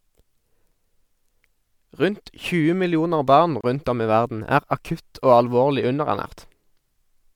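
At 3.61 s, right after "millioner barn" and before "om i verden er", the speech drops out for about 28 ms, which is a gap at a join of encoded pieces. The audio looks to have been cut into 4-second chunks, encoded one by one and glued back together untrimmed, so the encoder's start-up silence and last-frame padding sit in the middle. You hear a short hole with smeared edges, then the speech picks up exactly where it stopped.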